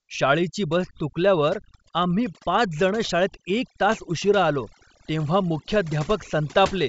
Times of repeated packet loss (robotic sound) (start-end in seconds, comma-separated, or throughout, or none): none